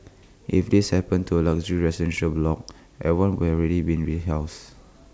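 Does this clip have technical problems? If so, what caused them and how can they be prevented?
No, this clip has no technical problems, so there is nothing to prevent.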